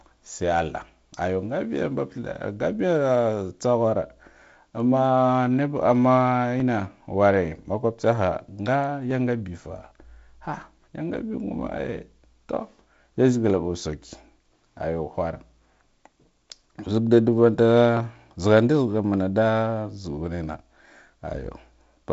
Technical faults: dropped samples

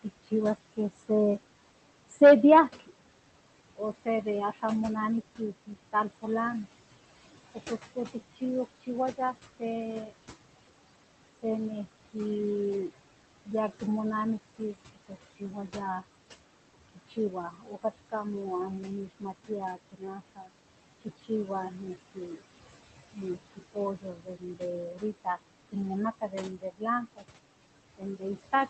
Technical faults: noise suppressor artifacts; speech cut by the noise suppressor

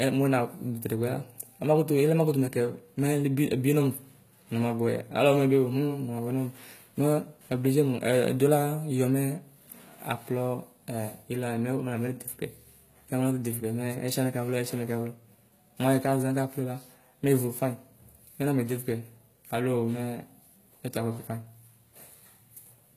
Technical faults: HE-AAC compression

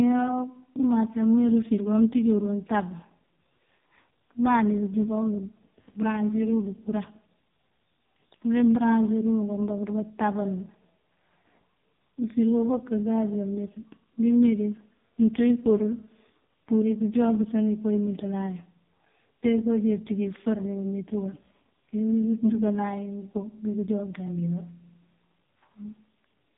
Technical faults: AMR narrowband mobile codec

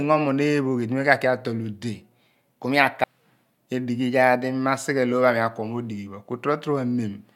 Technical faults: stream segment skipped

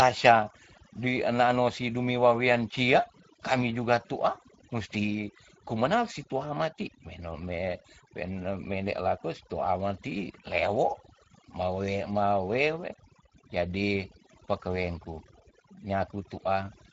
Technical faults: overdone noise removal; Speex codec

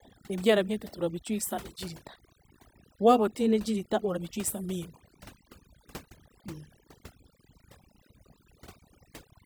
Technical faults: overdone noise removal

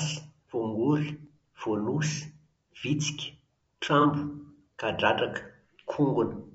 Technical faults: low-delay AAC compression; AAC frame loss with concealment

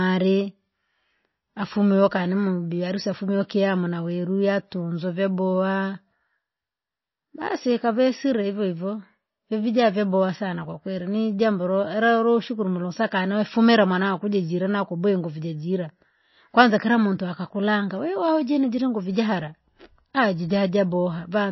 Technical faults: MP3 compression

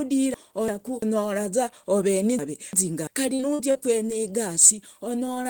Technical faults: chunks out of order; repeated packet loss (robotic sound)

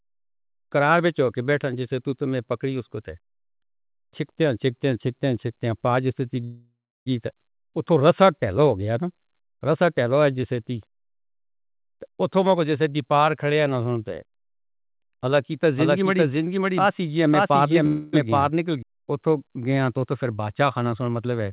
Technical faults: call audio freeze; jitter buffer speed-up; doubled audio track

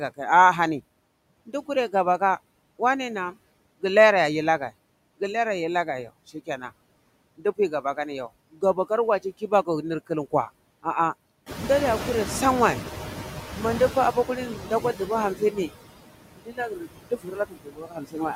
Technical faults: noise suppressor artifacts; speech cut by the noise suppressor; noise suppressor catching up

